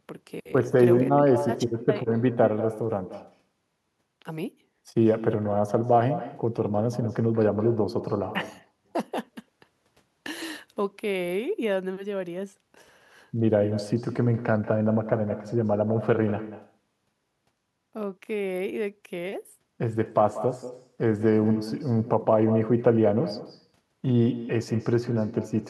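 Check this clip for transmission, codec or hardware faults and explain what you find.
One fault runs through the whole speech clip: echo with no canceller. The far end's loudspeaker feeds its microphone, returning every phrase about a fifth of a second later, about 13 dB down and thinner. Unlike room reverb, it is a distinct delayed copy, not a smooth decay.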